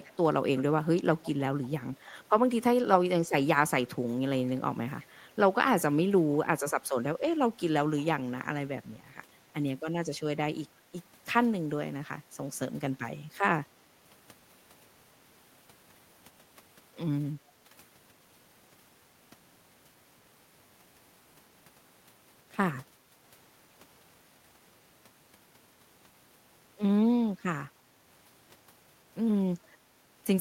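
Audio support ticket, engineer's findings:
Echo leak: faint delayed repeats of the speech in short scraps at 0.00–0.12 s, 0.57–0.63 s, 1.23–1.31 s, 2.06–2.10 s and 5.01–5.10 s. Delay fixed at 339 ms, level roughly 20 to 30 dB under the speech. Likely cause: far-end loudspeaker pickup not fully removed by the echo canceller. Unlike room reverb, it is a distinct late copy at a constant lag, not a smooth decaying tail.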